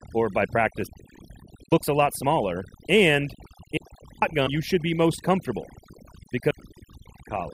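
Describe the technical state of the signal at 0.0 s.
At 0.0 s the speech is already affected by overdone noise removal, which runs through the whole clip. The noise reduction was set too hard, so any frequency band near the noise estimate is pulled down or switched off, and quiet parts of the voice are removed along with the noise. The background drops and breaks up into twinkling, warbling specks. Unlike a low-pass filter or low-bitrate dulling, the loss changes band by band from moment to moment rather than cutting a fixed range.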